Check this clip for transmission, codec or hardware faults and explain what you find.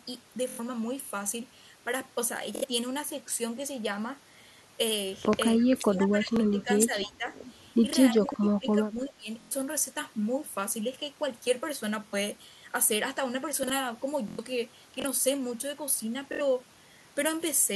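Three kinds of fault are audible: repeated Bluetooth stutter, two stretches where speech is pulled down during double talk, and three moments where chunks play out of order.

Bluetooth stutter occurs at 0.49–0.60, 2.56–2.65, 6.36–6.40, 9.41–9.51, 12.08–12.14, 14.28–14.39 and 16.33–16.41 s. Each time, the receiver ran dry of packets and kept replaying its last short slice of audio; where several repeats run together this gives a buzzing, machine-gun stutter. The longest gaps, about 93 ms, sound like several lost frames in a row. The shortest, at 6.36 s, is about 23 ms and sounds like a single one. Afterwards the speech picks up further on rather than where it stopped. The repeating slice is what separates this from a plain dropout or a reordering.

Speech suppressed in double talk affects 5.68–7.27 s and 8.11–9.28 s. The level dips by about 15 dB in the first stretch and about 20 dB in the second, over roughly one and a half seconds and one second. 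In places the voice thins or breaks into pieces. The likely cause is an echo canceller that could not tell the near talker from loudspeaker echo while both sides spoke, so it turned everything down. Unlike the stutter, nothing repeats. The voice simply sinks and comes back.

Chunks out of order appear at 8.26–8.34, 13.63–13.70 and 15.00–15.04 s. In each case a block of about 21 ms played later than the blocks meant to follow it. This points to a chunk arriving three, two and one positions late. No audio is missing, but the sequence is scrambled, so each spot sounds like a brief jumble with hard joins. That jumble, rather than a buzzing repeat, marks it off from Bluetooth stutter. The first one falls inside the second suppressed stretch.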